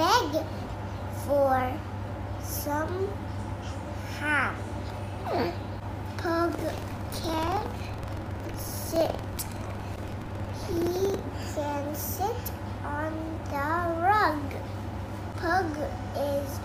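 Buffer tearing runs from 6.50 to 11.19 s as a rough, robotic 21.5 Hz rattle, which fits a 2048-sample buffer. Writer and reader have slipped, so a small slice of each period replays audio about a tenth of a second old, hard-joined at both edges.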